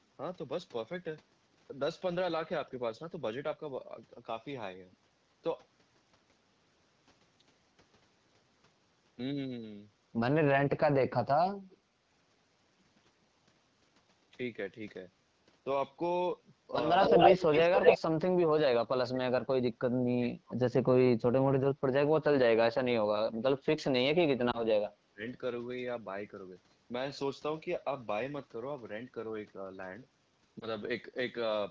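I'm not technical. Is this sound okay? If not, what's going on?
No. Three kinds of fault can be heard.

Echo leak: at 11.7 seconds, and more loudly from 17.0 to 18.0 seconds, a repeat of the sound arrives a quarter second late, likely from a loudspeaker whose echo wasn't fully removed. It is a separate copy, not a cut.

Speech suppressed in double talk: from 17.1 to 20.9, 21.5 to 23.6, and 24.1 to 25.3 seconds the main sound dips or drops out in pieces, likely because both sides talked at once. Nothing is repeated; the sound is simply turned down.

Lost AMR speech frames: around 24.5 to 24.7 and 30.6 to 30.7 seconds, there are very brief warbles or dips where a piece of the signal was lost in transmission. They are far shorter than the dips above.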